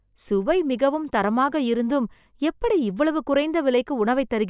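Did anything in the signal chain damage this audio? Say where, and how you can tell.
No, nothing along the chain left an audible mark on this speech at any stage.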